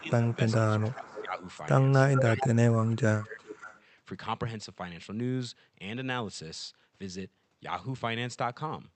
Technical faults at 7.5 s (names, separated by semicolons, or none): none